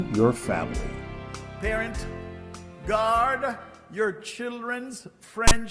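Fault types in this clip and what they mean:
File tags played as audio: a brief hard-edged rasp near 5.48 s, lasting 35 ms, from text tag bytes read as samples; its one-sided offset marks it apart from a digital click.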